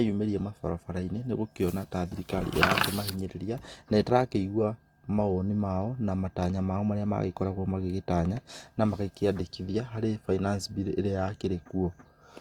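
Across the whole clip the speech has a plainly audible grainy, rough texture, with tonal parts of the voice turning noisy rather than clean, while the spectrum still reaches up to about 20.2 kHz. This points to Opus compression, likely in its fullband CELT music mode at a rate around 24 kbps: every band keeps its energy, but bands short of bits are filled by folded or noise content, which trades clarity for graininess.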